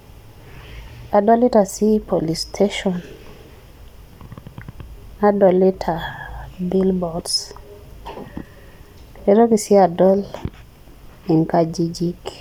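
No technical faults are audible anywhere in the speech recording.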